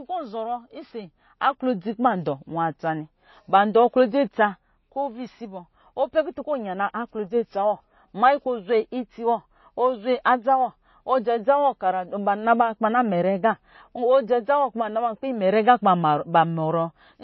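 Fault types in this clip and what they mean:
MP3 compression: The speech has nothing above 5.8 kHz and plainly audible coding damage, likely from a low-bitrate MP3 encode; the sound points to about 24 kbps, where the encoder cuts the treble and drops weaker frequency content frame by frame.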